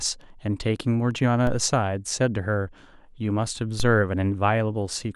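At 1.47 s and again at 3.80 s the speech carries a DC step: the waveform's zero line jumps abruptly by about -19 dBFS, as a recalibrating converter or a switched-in offset would cause, then drains away through a roughly 2 Hz high-pass characteristic rather than holding. Each jump lands as a brief low thump or click, while the speech continues unchanged over it.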